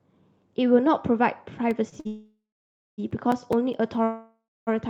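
A speech recording with three kinds of fault. A disc scratch overwhelms error correction once per revolution, producing CD scratch ticks: nine brief clicks or micro-dropouts of a few milliseconds each, recurring from 1.71 s to the end at about 4.9 s. Two packets arrive late and the jitter buffer empties, causing a short stall from a late packet each time: the last sound is held for 25 ms at 1.89 s and 52 ms at 2.00 s, then resumes with nothing lost. A longer network hold-up is the likely cause of two call audio freezes. At 2.07 to 3.00 s, the sound is stretched into a fading buzz before 560 ms of silence, a 908 ms gap in all. At 4.04 to 4.69 s, a similar fade ends in 250 ms of silence across 631 ms. Afterwards the speech continues from where it stopped.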